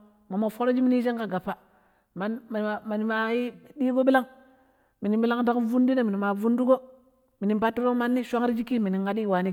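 A speech recording with no audible technical faults anywhere in the signal.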